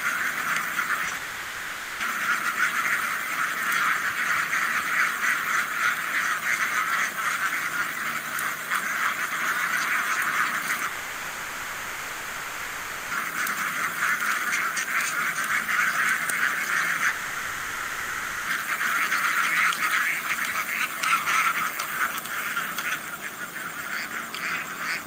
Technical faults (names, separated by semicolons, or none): short concealed packet loss; long network dropout